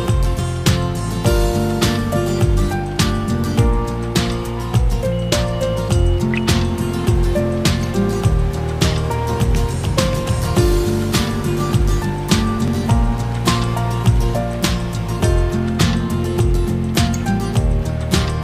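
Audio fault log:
12.68 s, dropped buffer (overrun): the audio jumps forward a tiny bit here. Only a millisecond or two is missing, and there's no gap of silence, because the two ends of the sound are butted straight together. The likely cause is the program failing to read its samples before the hardware wrote over that buffer, so the waveform steps abruptly at the join.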